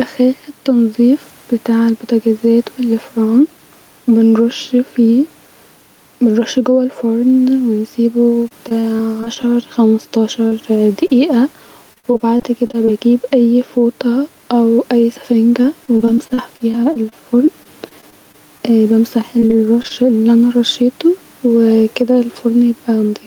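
Throughout the speech, the level swells and ducks by roughly 5 dB. This gain pumping likely comes from input gain set too high with a fast limiter clamping on each loud syllable. The room noise floor sits far below the speech.

From 8.43 to 9.45 s there is repeated packet loss (robotic sound). The receiver keeps patching holes of up to 26 ms by extending the previous sound, so the speech turns choppy, with pieces missing and about a sixth of the stretch synthesized.

At 10.47 to 10.53 s and again at 11.07 to 11.11 s, short concealed packet loss leaves isolated smears, 40 ms and 20 ms of filled audio. Each is a single brief wobble rather than a sustained robotic run.

Repeated packet loss (robotic sound) returns from 11.93 to 12.89 s, the densest run, with gaps up to 53 ms and nearly a quarter concealed. It recurs from 15.61 to 18.61 s and from 19.39 to 19.92 s, where the same stuttering, choppy texture comes back.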